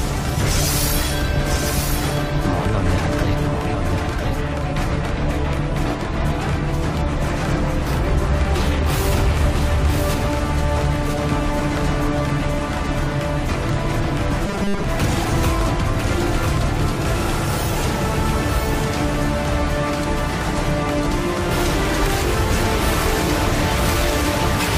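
A doubled audio track runs throughout: a second full-band copy, about 5 dB quieter, trails roughly one second behind with no decay, likely from a second capture path. Robotic sound from repeated short buffers appears from 14.46 to 14.84 s as a rigid 200 Hz buzz, which fits a 5 ms stretch of audio being replayed over and over while most of the real signal is skipped.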